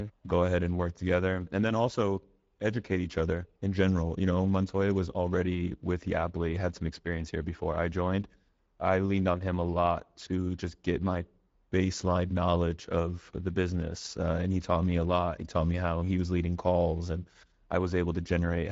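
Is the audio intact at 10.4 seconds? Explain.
No. At 10.4 seconds, as throughout the clip, the speech has passed through the Speex codec, whose CELP coder rebuilds the signal from a small budget of excitation bits, consistent with a middle setting of around 17 kbps. The damage is plainly audible: the speech sounds grainy and hoarse, with a noise-like rather than detailed top band, and nothing at all survives above 7.7 kHz.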